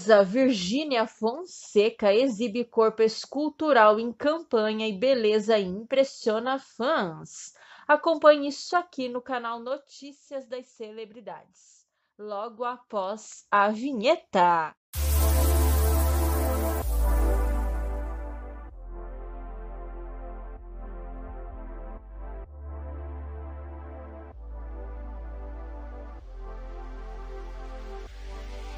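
From 8.68 to 10.16 s the level drops about 15 dB, then climbs back from 12.56 to 13.64 s. Both moves show zipper noise: roughly thirty unsmoothed steps per second tick audibly, unlike a clean fader ramp.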